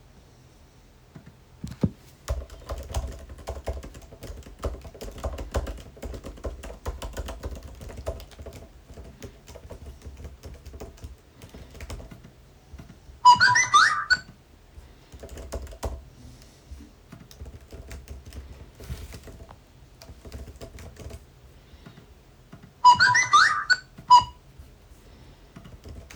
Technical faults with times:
none

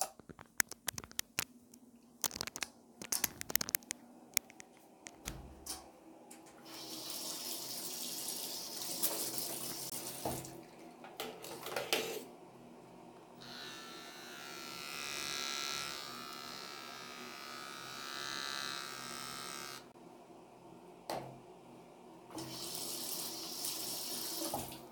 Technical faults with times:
9.90-9.92 gap between chunks
19.92-19.94 gap between chunks

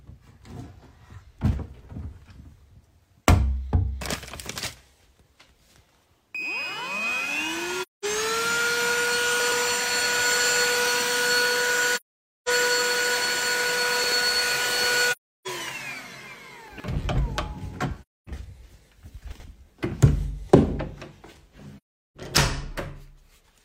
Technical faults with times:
7.82-8.05 AAC frame loss with muting
9.40-9.52 chunks out of order
11.96-12.49 AAC frame loss with muting
14.04-14.12 chunks out of order
15.11-15.47 AAC frame loss with muting
16.68-16.84 chunks out of order
18.02-18.29 AAC frame loss with muting
19.32-19.44 chunks out of order
21.77-22.17 AAC frame loss with muting

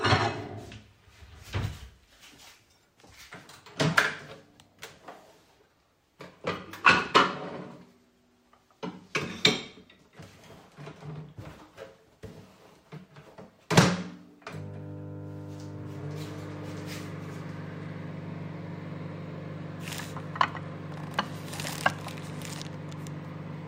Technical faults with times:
none

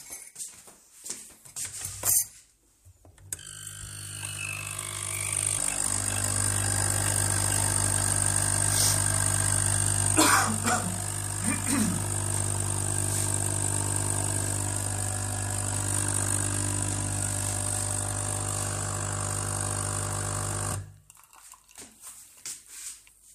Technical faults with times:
20.72-20.75 damaged data in a compressed stream
22.86-22.89 damaged data in a compressed stream

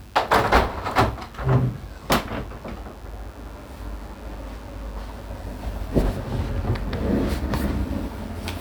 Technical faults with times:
0.00-8.61 mains buzz

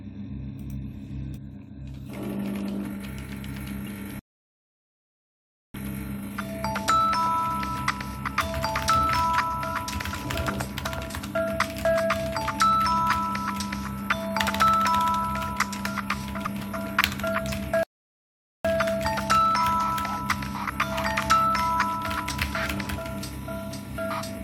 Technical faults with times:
1.36-1.38 damaged data in a compressed stream
3.87 damaged data in a compressed stream
4.19-5.74 playback stall
10.14-10.16 damaged data in a compressed stream
16.45 damaged data in a compressed stream
17.83-18.65 playback stall
22.84 damaged data in a compressed stream

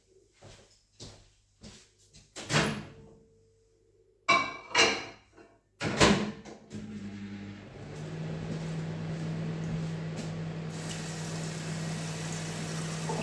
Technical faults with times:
none

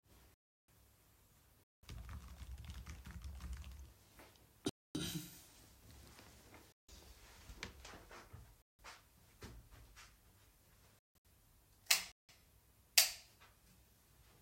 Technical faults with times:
0.34-0.68 block of digital silence
1.63-1.83 digital broadcast dropout
4.69-4.95 block of digital silence
6.72-6.89 digital broadcast dropout
8.62-8.79 block of digital silence
10.99-11.25 digital broadcast dropout
12.12-12.29 block of digital silence

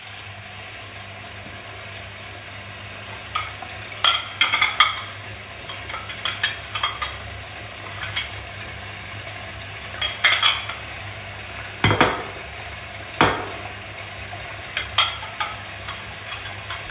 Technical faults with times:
none

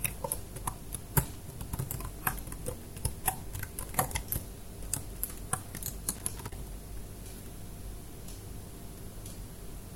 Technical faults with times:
1.20-1.41 loose connector crackle
6.15-6.53 loose connector crackle

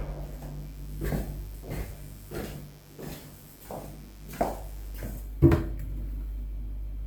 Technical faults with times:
0.00-4.95 mains buzz

